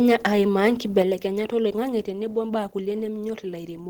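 Microphone overload appears from 0.96 to 1.00 s in this speech recording. The loudest peaks flatten and take on a harsh, crackly edge. The input was driven about 2 dB past the converter's ceiling, which squared off the wave tops of only a small share of samples, a few percent. The cause is likely a microphone input level set too high. Right after, at 1.02 s, the microphone volume is stepped down. Speech and background both fall by about 6 dB in a single abrupt jump rather than a gradual fade. This sudden drop, coming just after the distorted peak, points to the call software likely reacting to the overload by cutting the device's input gain in one move.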